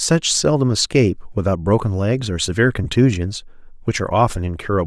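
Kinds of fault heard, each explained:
Bluetooth LC3 compression: The speech has a breathy, grainy edge throughout, and the damage is plainly audible. This likely comes from the LC3 codec of Bluetooth LE Audio. It strips upper frequencies and fills them with noise. The sound fits a bitrate near 48 kbps.
Lost LE Audio frames: Brief dropouts occur at 0.38 s and 2.84 s, each about 15 ms long. That length fits two lost 7.5 ms frames. The decoder refilled the gaps by reusing the last spectrum with random signs. Each gap becomes a short noisy smear.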